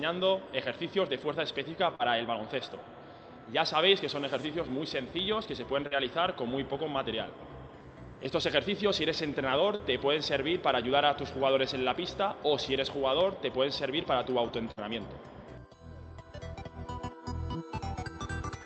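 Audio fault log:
1.95–2.02 s, 5.87–5.97 s, 9.75–9.82 s: short concealed packet loss. Each is a brief smear or wobble, as if the sound briefly stuck and then slid back into place. About 40 ms of audio failed to reach the decoder in time, and the receiver filled the hole by extending the preceding sound for just under 40 ms before blending back. At 5.87 s the patch also pushes the timeline later by a few milliseconds.
14.71–14.80 s: burst of packet loss. This is a longer hold, where the last sound lingers as a buzz or hiss that fades before the audio picks up again slightly further on. About 40 ms of audio was lost, and the receiver covered it with roughly 52 ms of continued, decaying sound, so the passage in between never plays. The audio passed through the Opus call path, which is band-limited to 8 kHz.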